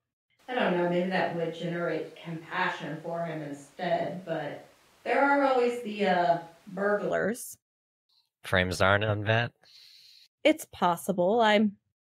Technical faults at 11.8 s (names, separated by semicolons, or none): none